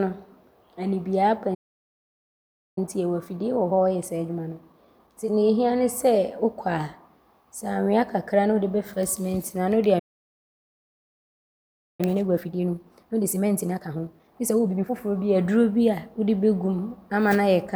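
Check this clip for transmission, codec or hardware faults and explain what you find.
Two faults show up twice each: playback stalls, each followed by a time-compressed catch-up.

The first playback stall hits at 1.54 s, right after "anibie aba", and the speech drops to silence for about 1.22 s until 2.78 s. The second comes at 9.99 s, after "no a ne wode", and goes quiet for a full 2.0 s until 12.01 s. In both, the speech cuts off mid-flow and then resumes. The likely cause is the player running dry of buffered data or its thread being blocked, so nothing reached the output until it recovered.

Each stall is followed by a time-compressed catch-up, where the player works off its backlog by snipping out small pieces of audio and cross-fading the joins. From 2.78 to 5.78 s the speech runs about 1.1 times fast, a mild hurry at normal pitch. From 12.01 to 15.01 s it runs 1.5 times fast, so the rushing is much more obvious.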